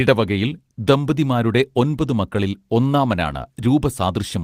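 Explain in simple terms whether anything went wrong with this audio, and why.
Nothing went wrong here.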